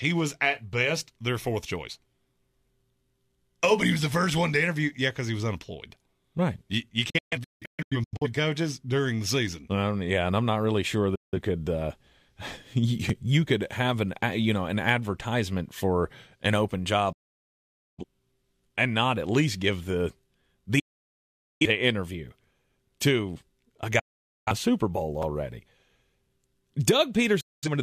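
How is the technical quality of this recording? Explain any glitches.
Not great, honestly; the speech keeps cutting out. There are digital broadcast dropouts at 7.10–8.27 s (a cluster of short holes right before "coaches during the season"), 11.15 s after "I'm not really sure", 17.12 s after "advertisement for an open", then 20.79, 23.99 and 27.41 s. Each time the receiver lost the signal or got corrupted frames and muted, fading to silence in about 8 ms. Whatever was sent in those 0.17–0.85 s gaps is simply gone.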